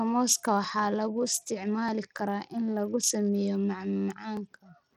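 From the start, the speech carries a plainly audible gritty, grainy edge, with the top end thin and unsteady and nothing above 17.6 kHz. This is likely Bluetooth SBC compression at a small bit pool, fitting a low bitrate near 80 kbps, starving the upper sub-bands of bits.

From 0.64 s to 4.37 s, a click recurs every 1.24 s, about four in all. These are clock drift buffer slips: two mismatched clocks, likely off by roughly 500 ppm, make the buffer drop or repeat a few dozen samples at a time.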